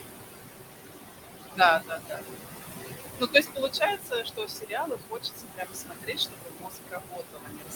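A noise suppressor is treating parts of the spectrum as steady background and pulling them down by about 19 dB in the gaps, frame by frame, for the whole clip. Because the room noise sits only about 3 dB below the speech, the suppressor has little separation to work with. The noise drops away between phrases and swells back under them. These are noise suppressor artifacts.

From 1.79 to 2.22 s the suppressor mistakes part of the speech itself for noise, cutting it by as much as about 19 dB over roughly a third of a second in total. Soft consonants and endings in that stretch come out swallowed and faint. The same speech cut by the noise suppressor returns at 3.19 s and lasts to the end of the clip, now reaching about 21 dB. Quieter syllables sink into the lowered background and sound swallowed.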